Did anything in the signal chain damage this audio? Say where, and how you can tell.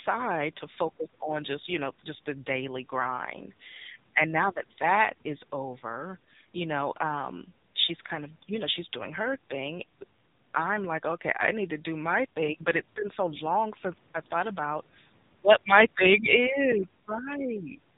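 Yes, at the codec stage, for the whole clip: it's been through the AMR narrowband mobile codec. Nothing survives above about 3.8 kHz, and the speech is heavily buzzy and synthetic, which fits a low AMR-NB mode around 6.7 kbps, where a pitch-driven vocal tract model rebuilds the voice from very few pulses.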